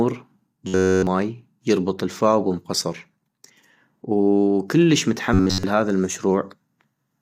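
Low-delay AAC compression runs through this whole speech recording: the voice sounds rough and grainy, likely AAC-ELD at a bitrate around 32 kbps. Robotic sound from repeated short buffers appears at 0.67–1.07 s, just before "يربط الفاو بام قصر", and again at 5.34–5.63 s. Both passages become a rigid metallic buzz at 93.8 Hz, likely because a roughly 10.7 ms block is looped entirely in place of new audio.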